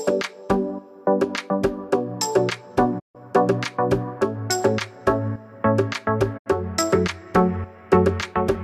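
Digital broadcast dropouts occur at 2.98 to 3.17 s and again at 6.37 to 6.48 s. Each time, the receiver stopped getting frames it could decode and muted its output, with a quick fade of about 20 ms, until valid frames returned. The first hole loses about 144 ms of audio, which fits six lost frames. The second loses about 72 ms, which fits three. The sound simply vanishes and resumes further along, and whatever was broadcast during each gap is gone.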